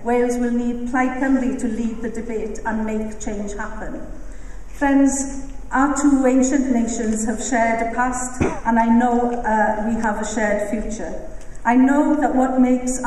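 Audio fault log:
No audible faults detected anywhere in the recording.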